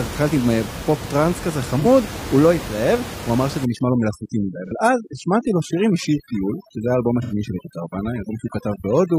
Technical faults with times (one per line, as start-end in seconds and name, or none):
1.80-1.85 AAC frame loss with concealment
3.65-9.19 overdone noise removal
4.67-4.72 AAC frame loss with concealment
7.22-7.33 AAC frame loss with concealment